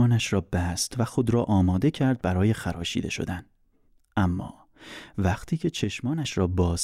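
A likely one channel drops out, twice: from 2.75 to 2.82 s and from 5.84 to 6.25 s. Summed to mono, the speech abruptly falls about 6 dB, a brief dip first, then a longer sag before recovering.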